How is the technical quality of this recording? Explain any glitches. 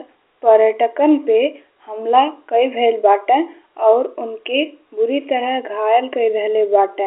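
Nothing stood out as a glitch when listening to this telephone-band speech recording.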